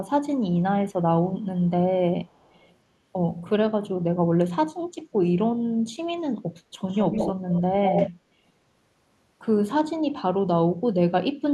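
A faint delayed copy of the speech trails it by 292 ms at 1.42–1.46 s and 2.26–2.75 s, then returns nearly as loud at 153 ms behind during 6.88–7.33 s and 7.51–8.1 s. This echo leak is likely a far-end loudspeaker's pickup escaping its echo canceller.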